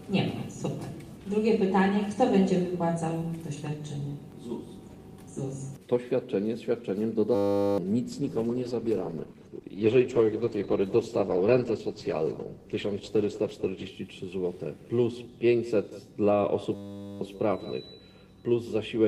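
At 7.35 s the sound freezes into a steady 100 Hz buzz until 7.78 s. This is a system hang loop. The system stalled while the hardware replayed one 10 ms slice of its buffer. Around 0.4 s of audio is lost.

From 8.11 s to 13.99 s the sound turns rough and muffled, with the highs cut off. This is a call bitrate drop. The encoder was starved of bits. The change in quality points to a fall from about 48 to 14 kbps.

At 16.75 s the same system hang loop returns. The same 10 ms piece repeats as a 100 Hz buzz until 17.21 s. About half a second of audio is lost.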